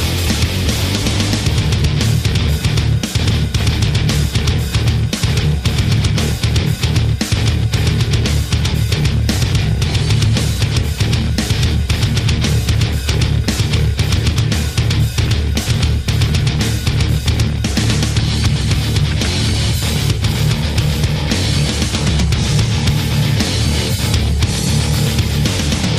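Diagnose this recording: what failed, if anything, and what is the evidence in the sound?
Hard clipping runs through the whole recording: the signal was driven about 7 dB beyond what one stage could pass, whether an analogue-to-digital converter, a sample-format conversion or another gain stage, and roughly 4 percent of samples were cut off. Each loud moment carries a crackle. On a waveform the peaks appear squared off into flat plateaus. On a spectrogram, the louder moments show added harmonics smeared up toward the top of the spectrum.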